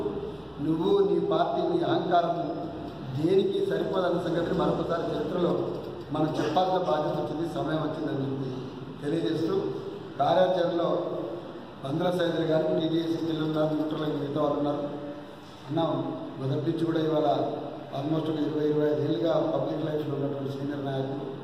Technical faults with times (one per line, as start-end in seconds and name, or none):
none